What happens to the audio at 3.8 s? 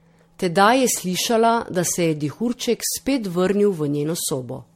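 At 3.8 s the speech sounds swirly, hollow and smeared, with blurred attacks and nothing above 16.4 kHz, as across the whole clip. This is generation loss, likely from roughly seven MP3 passes near 64 kbit/s, each re-quantising on a shifted frame grid so noise and spectral holes accumulate.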